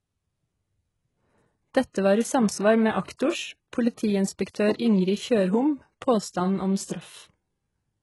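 Throughout, the treble above 11.5 kHz is gone and the sibilants sound gritty and lispy, most likely from heavy HE-AAC compression at a bitrate around 12 kbps. The rebuilt upper band is mismatched, unlike plain low-pass dullness. Pre-echo appears at 1.93–1.95, 3.03–3.08, 3.17–3.19, 4.50–4.55 and 4.76–4.79 s. Short hiss runs 22 to 46 ms ahead of sharp onsets, smearing them. Because the noise comes before each attack rather than after it, it is not reverb.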